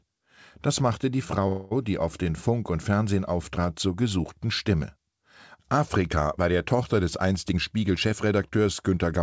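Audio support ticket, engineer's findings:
1.48–1.73 s: call audio freeze, likely jitter buffer underrun. Last sound held as fading buzz, 0.23 s gap inserted, nothing lost; spectrogram shows smeared flat band.

7.49–9.14 s: jitter buffer speed-up draining excess delay. Speech hurried at 114% speed, pitch unchanged, about 0.2 s trimmed; waveform shows whole pitch periods cut out, cycles unchanged in length; spectrogram shows harmonics at unchanged height.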